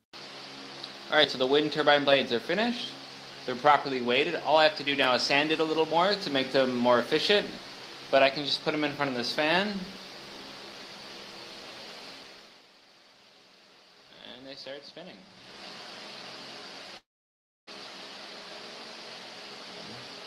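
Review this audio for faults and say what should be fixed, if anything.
At 16.97 s the sound stalls until 17.69 s: a brief fading continuation of the last sound, then about 0.64 s of silence, after which the audio resumes exactly where it stopped. This is a call audio freeze, likely from packets delayed in transit so the jitter buffer ran dry. Unlike a dropout, nothing is lost; a gap of about 0.7 s is inserted and everything after it arrives that much later. Preventing it means giving the jitter buffer enough adaptive headroom and fixing the network path causing the delay bursts.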